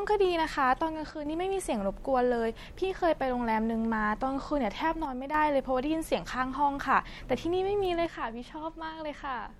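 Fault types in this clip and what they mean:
One channel drops out: the speech dips abruptly by about 6 dB three times, the last until the end, likely from one stereo channel going missing.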